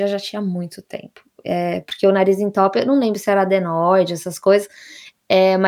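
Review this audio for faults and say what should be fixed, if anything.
No faults found in this speech recording, so nothing needs fixing.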